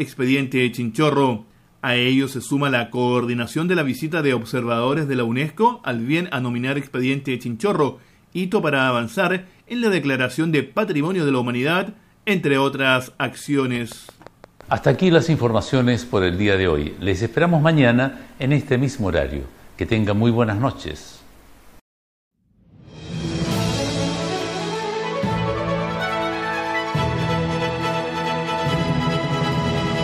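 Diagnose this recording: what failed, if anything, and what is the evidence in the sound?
Likely interference on the analogue wiring injects a train of clicks from 13.76 to 14.96 s: about seven regularly spaced pops, 5.9 per second, roughly as loud as the sound.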